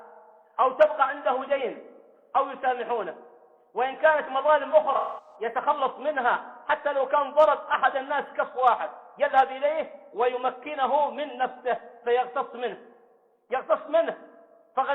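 From 4.96 to 5.35 s, AAC frame loss with concealment leaves a smeared, noisy patch. About 213 ms of coded audio is missing, which fits roughly five lost frames. The decoder rebuilds the gap from the last good spectrum with randomised phase, so detail blurs until clean decoding resumes.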